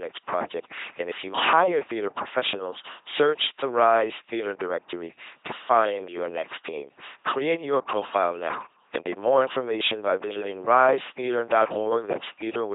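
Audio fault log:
Throughout: LPC-10 vocoder. The speech sounds like a buzzing, mechanical robot from start to end. Each moment is rebuilt from either a pulse train or noise, never a blend. That source then passes through a short all-pole filter standing in for the vocal tract. Wrong voicing choices come out as buzz or hiss. Damage is heavy, and nothing sounds above 3.8 kHz. This fits a 2.4 kbit/s LPC-10 stream.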